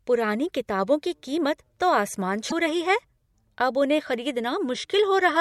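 At 2.47 s, right after "तो आसमान" and before "रही है", damaged data in a compressed stream lets the decoder misread frames and lose sync for about 56 ms, producing a brief disruption.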